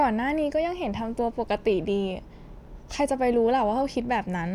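No technical faults can be heard anywhere in the recording.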